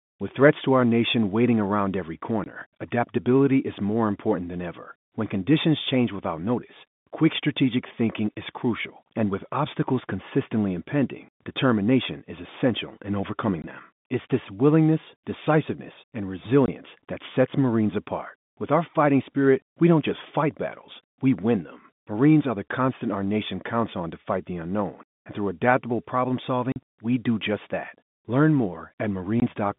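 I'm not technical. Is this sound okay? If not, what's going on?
No. The speech briefly drops out at 2.44, 13.62, 16.66, 26.72 and 29.4 seconds, each gap about 20 ms, the one at 26.72 twice as long. This is packet loss filled with silence: chunks of the call went missing, and the gaps were left empty.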